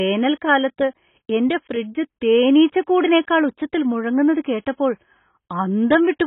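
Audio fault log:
throughout AAC compression: dull, smeared speech with fizzy sibilants and nothing above 3.8 kHz, likely from heavy AAC-LC coding at a very low bitrate.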